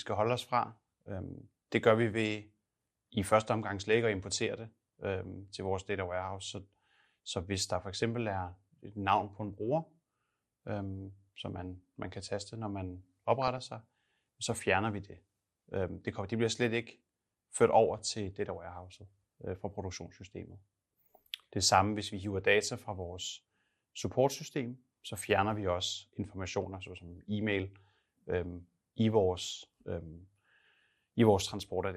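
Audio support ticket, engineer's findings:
MP2 compression, whole clip. Dull speech, upper sub-bands cut out and flickering, granular gurgle. Damage plainly audible. Likely cause: MPEG Layer II encoder starved of bits, consistent with about 80 kbps. Too few bits per band, so top bands drop out and the rest are coarsely quantised.

DAB burbling, 3.79–4.01 s. Burble after "i første omgang", clear by "at importere det øhm". Residual bit errors in MP2 frames corrupt sub-band samples. Short noise blips in single sub-bands. Fits around ten bad frames.

DAB burbling, 13.42–13.58 s. Shorter burst between "kan taste når man" and "sig så fjerner vi". Same mechanism. Lighter error load, about ten frames hit.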